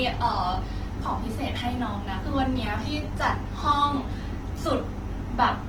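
Opus compression runs through the whole clip, from start to finish. The speech sounds rough and grainy rather than swirling, which is likely the result of Opus in its music (CELT) mode. The encoder keeps each band's energy but, short of bits, fills bands with folded lower content or noise. The damage is plainly audible and fits a low bitrate around 16 kbps, though the bandwidth stays full, reaching about 20.1 kHz.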